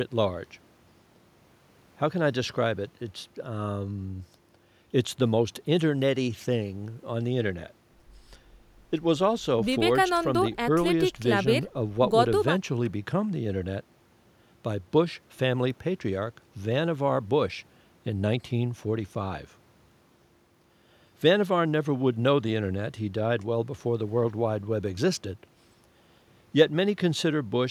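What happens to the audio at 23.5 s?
Nothing goes wrong at 23.5 s; the speech continues intact through that moment, with no dropout, click or distortion to be heard.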